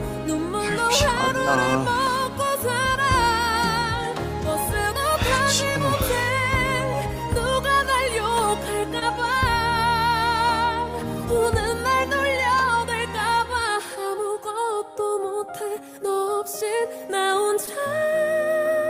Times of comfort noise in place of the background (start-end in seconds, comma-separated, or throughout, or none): none